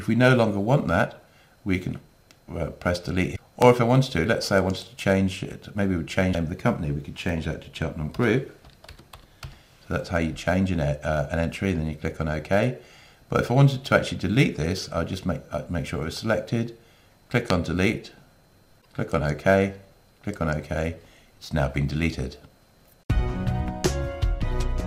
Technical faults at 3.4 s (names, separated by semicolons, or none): broken MP3 bit reservoir